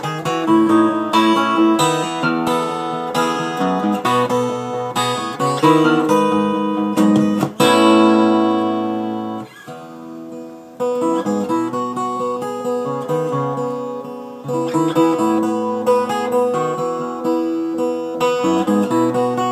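No technical faults can be heard.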